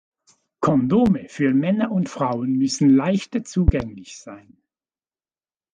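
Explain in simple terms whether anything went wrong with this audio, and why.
Two loud pops cut into the speech. The first comes at 1.06 to 1.09 seconds, a single sharp pop well above the level of the speech. The second comes at 3.68 to 3.83 seconds, just after "müssen leichter". It is two pops in quick succession, and even louder. The speech carries on underneath both. A loud pop like this is likely a sudden electrical jolt, from a plug, a switch, static or a glitch in the sound hardware.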